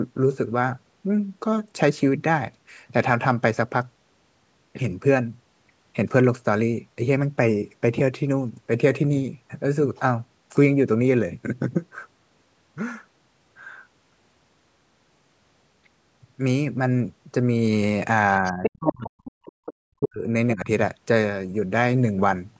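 From 18.41 to 19.27 s the speech drops away in pieces, at worst by about 40 dB. This is speech suppressed in double talk. Both ends were likely talking at once. The echo canceller could not tell the near talker from the loudspeaker echo, so it turned everything down. The gaps add up to under a second.

Inside that stretch, from 18.45 to 18.92 s, the other side's voice is leaking through. It sits only a little below the speech, about 5 dB down. The near device plays the far end on a loudspeaker. The microphone picks it up, and the canceller likely failed to remove it. It sounds like a second voice underneath.

A weaker leak follows from 19.25 to 19.74 s, about 15 dB below the speech. It is fainter.

The suppression returns from 19.85 to 20.27 s. Again the speech sinks deeply, by about 40 dB, for under half a second.

A last, shallow dip comes from 20.55 to 20.67 s. It is only about 10 dB and very brief.

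The call's microphone processing limits the audio to 8 kHz and below.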